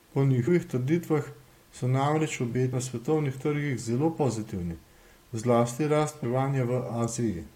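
Damaged data in a compressed stream makes the decoder lose frame sync and resynchronise, leaving brief blips in the speech at 0.47, 2.72 and 6.23 s.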